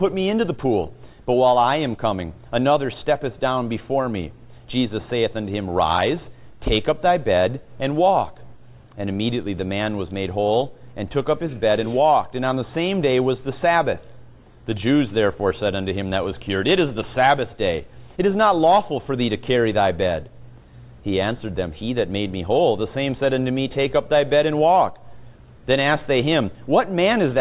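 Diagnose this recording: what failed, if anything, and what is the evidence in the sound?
Nothing failed; no stage shows any audible fault.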